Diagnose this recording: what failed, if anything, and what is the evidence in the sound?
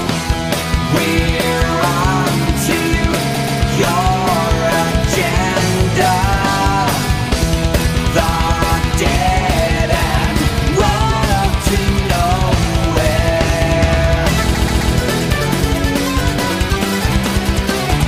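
Repeated frames, codec or storage side. A 131 ms chunk stutters, playing three times from 3.33 to 3.59 s and four times from 14.54 to 14.93 s. That fits a five-frame block written again, adding 0.26 s and 0.39 s.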